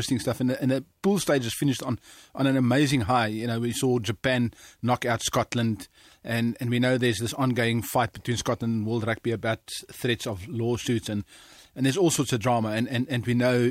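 Nothing stood out as a technical fault on listening to the speech in this recording.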